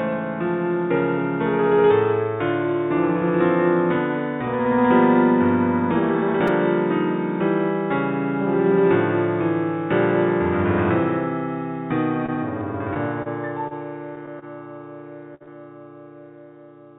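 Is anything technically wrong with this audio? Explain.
Yes, there are several faults, all heard through a band that stops at 4 kHz, which fits a G.711 A-law call path.

At 6.48 s there is a repeated buffer. Fresh audio arrived late, so the same tiny slice played twice more. Each slice is only about 5 ms, so it comes across as a brief click-buzz, not an audible stutter. Around a hundredth of a second is lost.

From 12.26 to 12.36 s, a short stall from a late packet holds one sound for about 25 ms before the audio carries on from the same point. Nothing is missing. That is what separates it from a loss: the sound drags with a faint buzz, and no piece is skipped.

From 12.94 to 14.45 s, repeated packet loss gives a choppy texture. Six separate holes, the longest 30 ms, are each patched by continuing the last sound, about 125 ms in total, and about 90 ms of real audio is gone. Unlike a single burst, the damage keeps recurring across the whole stretch.

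From 15.35 to 15.43 s, a burst of packet loss leaves one continuous hole. The receiver extends and fades the last sound for about 55 ms, heard as a held buzz or fading hiss. The audio then resumes about 30 ms further on than where it broke off.

Right after, from 15.43 to 15.50 s, short concealed packet loss is filled for about 37 ms and blended back, with about 30 ms missing. It comes across as a quick smear or wobble, shorter than the burst before it.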